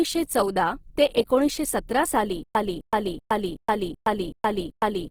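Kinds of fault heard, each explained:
Opus compression: The encoder, likely Opus in its CELT mode at a rate fitting roughly 16 kbps, ran short of bits and filled bands with folded or noisy content. The speech keeps its full bandwidth up to about 20.4 kHz, but sounds plainly grainy and rough.
Stutter with silent gaps: The stream likely stalled after "ते एकोणीसशे सतरा साली" at 2.43 s. Each retry replayed the same 258 ms fragment and then went to digital silence for 120 ms. The burst returns seven times every 379 ms until the end, and the audio that should have followed is lost.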